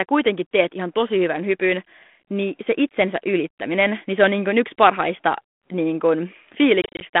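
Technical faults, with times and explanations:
6.82 to 7.06 s, packet loss on an ADPCM call: 120 ms drops out as silent gaps up to 30 ms. The decoder's predictor loses step, so speech returns slightly distorted.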